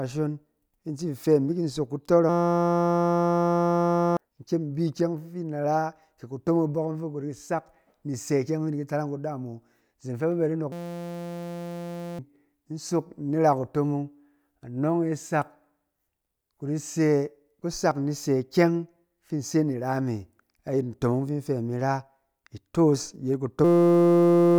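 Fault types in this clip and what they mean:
System hang loop: The system froze while one 5.8 ms buffer kept repeating. This gives a steady 172 Hz buzz, three times, each replacing a second or two.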